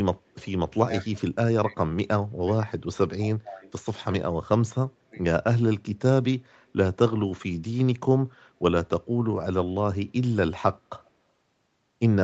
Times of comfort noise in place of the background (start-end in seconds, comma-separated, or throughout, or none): none